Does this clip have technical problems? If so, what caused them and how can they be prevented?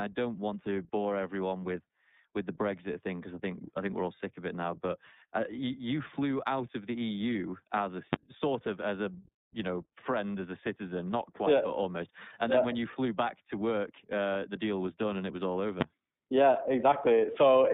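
Yes. The iLBC codec is present throughout: the sound is confined to roughly 150 Hz to 3.7 kHz, with a rough, synthetic edge from coding each frame independently, consistent with the 30 ms mode. Prevent it by sending the audio over a wideband codec instead of a narrowband VoIP path.

Invalid numbers at full scale cause single loud bangs at 8.13 s and 15.81 s. Each time, a processing stage produced infinite or invalid values that were clamped to maximum level for about 10 ms. Prevent this by checking for and replacing invalid values before output.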